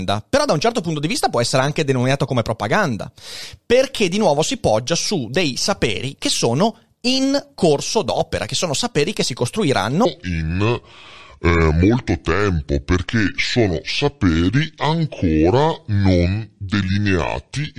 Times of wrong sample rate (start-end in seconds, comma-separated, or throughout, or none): 10.05-17.78